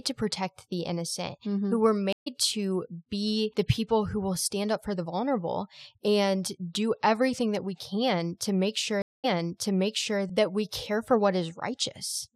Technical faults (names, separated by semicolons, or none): stream reconnect